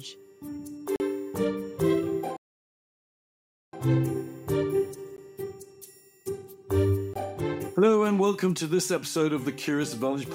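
Block of digital silence at 0.96–1.00 s: a 40 ms stretch of samples drops to zero, most plausibly an output buffer not filled in time.

Playback stall from 2.37 to 3.73 s: the sound halts mid-flow for about 1.36 s, likely because the player ran out of data or its thread was blocked, before carrying on.

Block of digital silence at 5.17 s: a 15 ms zeroed gap with abrupt edges.

Block of digital silence at 7.14–7.16 s: another hard cut to zero, 20 ms long.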